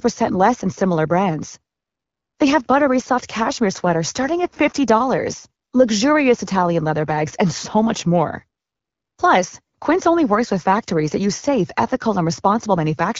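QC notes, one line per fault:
The speech signal shows no faults; it has passed through the AMR wideband (HD Voice) codec at 12.65 kbit/s, which keeps it clear with only light coding damage, coding the band up to 6.4 kHz directly and filling 6.4 to 7 kHz with shaped noise.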